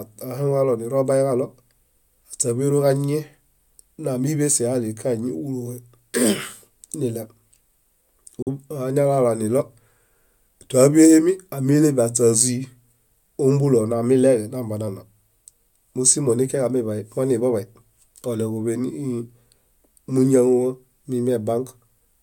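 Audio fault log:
8.42–8.48 s, Bluetooth dropout: the speech cuts to silence, then picks up partway along, as though it had kept playing through the gap, so about 43 ms of it is simply missing. The likely cause is wireless packets failing to reach the headphones in time, with the output left empty until good data arrived. The size of the hole fits two lost packets.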